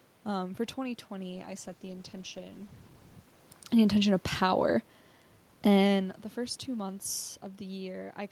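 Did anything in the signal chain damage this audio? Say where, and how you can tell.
Yes. The damage is a call bitrate drop at the codec stage, from 1.31 s to 3.97 s. The audio turns rough and muffled as the top end disappears, and it stays at its worst for about 1.6 s before clearing. That suggests the encoder went from around 48 kbps down to around 18 kbps and had to quantise coarsely and drop high frequencies. The level shift near 3 s, by contrast, changes loudness but not bandwidth. Unlike packet loss, there are no gaps.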